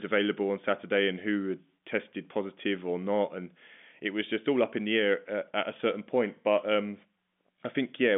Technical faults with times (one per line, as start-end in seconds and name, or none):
none